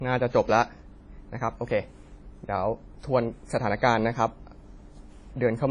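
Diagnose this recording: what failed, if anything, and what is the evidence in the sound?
Codec stage: nothing above 10 kHz throughout, a band limit that fits a 32 kbit/s first encoding, so this is likely low-bitrate audio saved at a high bitrate.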